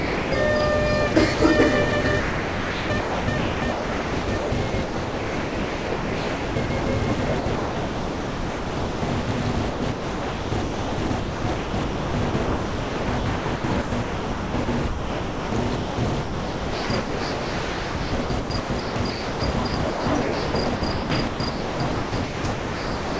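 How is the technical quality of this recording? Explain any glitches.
Poor: the sound repeatedly gives way to synthetic comfort noise, from the opening through to the end. The call path carries nothing above 8 kHz.

Sound dropped by the voice detector, 0 to 0.32 s: the sender's voice activity detector likely judged the opening sound to be background and sent nothing, so the receiver generated comfort noise instead. For the first 0.31 s or so the real sound is missing. A steady, featureless noise stands in until the detector triggers and transmission resumes.

Sound chopped by the voice detector, at 1.14 to 1.40 s, 1.90 to 6.86 s, 7.40 to 9.28 s, and 9.70 s to the end: the detector likely kept switching between sending and muting within each stretch, and comfort noise filled every muted gap. About 80 ms, 3.8 s, 1.6 s and 9.2 s are replaced in these stretches. The sound turns choppy, with quiet parts and edges cut away.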